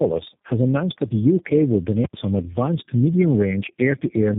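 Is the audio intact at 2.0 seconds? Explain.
No. Just after 2.0 seconds, at 2.05 s, a very loud pop bursts out. The sound drops out completely, and a second pop lands at 2.13 s, right before "some advanced medium". This is invalid numbers at full scale. A calculation produced infinite or invalid values, and these were clamped to the maximum level for one processing block of about 85 ms, which fits a 4096-sample block. The output pins at one extreme value, far beyond the speech peaks, so only the two edges are heard as pops.

Around that moment the speech also sounds rough, muffled and warbly, with nothing above 3.8 kHz. This is tandem speech coding. The call was decoded and re-encoded at each link, and the sound points to about three low-rate speech coders in a row. Each coder works on the already degraded output of the one before, so the artefacts pile up beyond what any single codec would leave.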